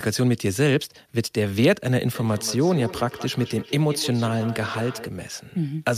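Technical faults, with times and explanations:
2.14 to 5.13 s, feedback echo between two devices: the speech starts coming back at itself roughly every fifth of a second, getting thinner and more ringing each time round, with the strongest return only about 13 dB below the direct speech. Two devices in the same room are on the call, and one mic is picking up the other's speaker. Each echo canceller only knows about its own playback, so the loop never gets cleaned up.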